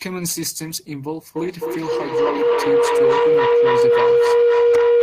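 From 1.36 s to the end, feedback howl takes over the speech. A microphone-to-loudspeaker loop gains level each pass. The repeats grow and narrow to a tone around 500 Hz. The loop repeats roughly every 0.3 s. It peaks about 10 dB above the speech.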